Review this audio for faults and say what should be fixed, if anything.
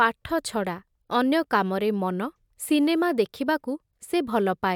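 Nothing needs fixing: the speech signal carries no technical faults.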